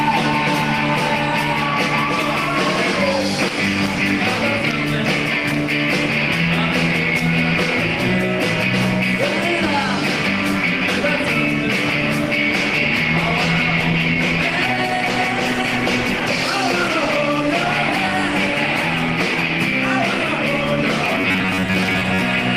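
A call bitrate drop runs from 12.49 to 18.86 s. The encoder's budget falls from 32 kbps to 18 kbps, and it stays near that floor for about 5 s of the stretch. With fewer bits, the codec quantises the signal more coarsely and trims the top of the spectrum, so the sound loses its air and clarity. It turns duller, with a rough, watery edge, until the rate climbs back.

A robotic sound from repeated short buffers appears from 21.05 to 22.22 s. The sound takes on a fixed, metallic buzz at 93.8 Hz, a rigid drone that only loosely tracks the underlying audio. That buzz is likely caused by a playback engine starved of fresh data that loops its most recent fragment of roughly 10.7 ms. About half of what is heard in this stretch is repetition of that fragment, and the skipped material is lost.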